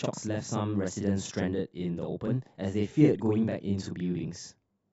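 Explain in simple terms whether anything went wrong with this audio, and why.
Every syllable of the speech is followed by a second copy of itself, from start to finish. This is channel delay, heard as doubling: one stereo channel runs 40 ms behind the other, and when both are combined into one, the late copy arrives as an equally loud slap echo.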